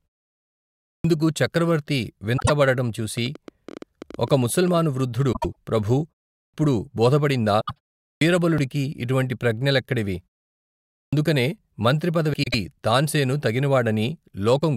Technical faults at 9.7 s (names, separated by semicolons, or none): none